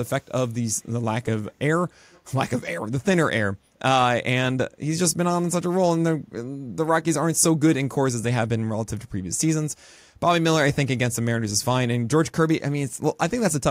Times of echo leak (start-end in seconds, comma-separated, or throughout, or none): 0.21-0.25, 2.11-2.21